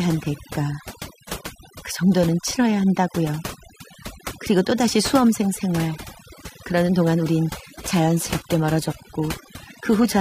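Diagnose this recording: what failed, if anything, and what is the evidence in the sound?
Overdone noise removal throughout, at the processing stage: the background drops and breaks up into twinkling specks as quiet bands get gated away.

From 7.65 s to the end, the adaptive stream drops to a lower bitrate on the network side: nothing above 14.9 kHz, and an abrupt quality step with no gap.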